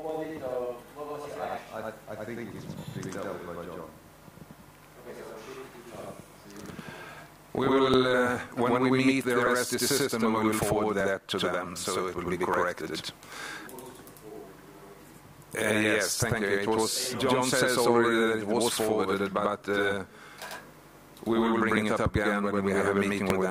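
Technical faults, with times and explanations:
Throughout: channel delay (doubling). One channel arrives about 92.9 ms late, which fits a 4096-sample buffer, and the mono sum carries both copies at equal level, so every onset slaps back once. On a waveform each transient appears twice, 92.9 ms apart.
0.25 to 23.30 s: clock drift buffer slips. A regular click recurs every 1.54 s, about fifteen times. The likely cause is two clocks disagreeing by roughly a tenth of a percent, so about 70 samples are dropped or repeated each time. Each slip shows as a thin vertical broadband line on a spectrogram.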